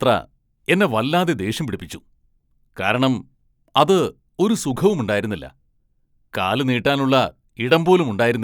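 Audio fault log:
No faults are audible anywhere in this speech clip.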